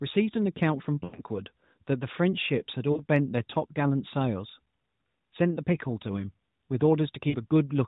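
Smeared, fading dropouts at 1.04–1.19 s, 2.92–3.04 s and 7.30–7.36 s are lost AMR speech frames, concealed by stretching the last good sound.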